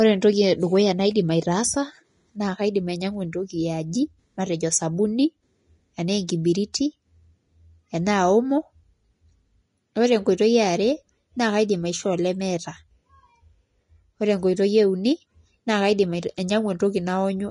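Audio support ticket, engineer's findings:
Grainy, hissy treble throughout the speech; nothing above 10.6 kHz. Likely Vorbis compression near 31 kbps. Treble detail turns to noise, unlike the metallic swirl of MP3.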